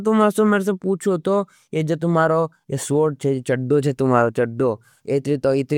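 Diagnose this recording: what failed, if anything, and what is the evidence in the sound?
Nothing in the speech signal points to a failure at any stage of the chain, and the recording comes through intact with no audible disturbance.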